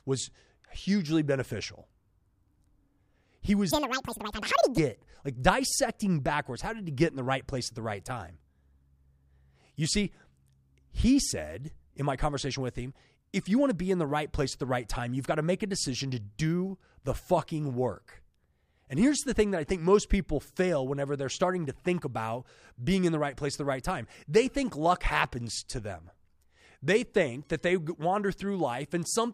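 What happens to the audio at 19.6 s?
Nothing goes wrong at 19.6 s; the speech runs on intact through that moment, with no dropout, click, distortion or other fault.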